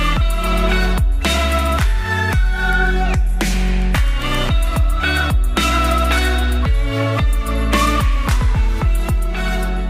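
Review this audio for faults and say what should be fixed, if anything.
Nothing here needs fixing, since no faults turn up anywhere in the recording.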